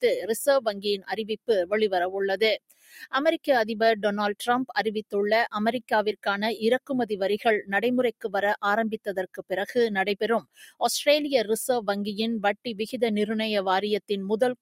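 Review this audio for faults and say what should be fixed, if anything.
A noise suppressor built for speech has been applied to this material throughout. It treats steady content and decaying tails as noise, so the level swings by a few decibels as attacks pass through while sustained parts sink. The sound pumps and thins. On a waveform the envelope breathes unevenly between transients. On a spectrogram, held partials and reverb tails fade or smear into patchy gaps rather than trailing off smoothly. To prevent this, bypass or disable speech noise suppression for non-speech audio.

There are two spots where the noise suppressor has cut the sound, from 2.70 to 3.08 s and from 10.41 to 10.81 s. In each, the suppressor judged the sound to be noise and pulled it well below its surroundings, by about 13 dB at the first and about 17 dB at the second. On a waveform these look like sudden notches in the envelope. 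On a spectrogram they appear as darker vertical bands where the energy drops across frequencies. To prevent this, turn the suppressor off or reduce its strength so it cannot gate sustained content.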